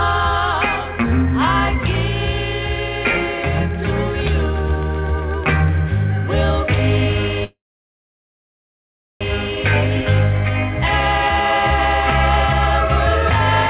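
A train of clicks runs from 2.82 to 5.69 s: about twenty similar pulses at a steady 8 per second, peaking roughly 5 dB above the surrounding sound, most likely interference from nearby equipment or a faulty connection or power supply. A call audio freeze follows at 7.44 to 9.23 s. The jitter buffer likely ran empty while packets were held up. The receiver stretches the last sound briefly, then leaves about 1.64 s of silence, and the audio resumes where it stopped, 1.77 s late with nothing lost. The whole clip is band-limited at 4 kHz, which fits a G.711 mu-law call path at 64 kbps.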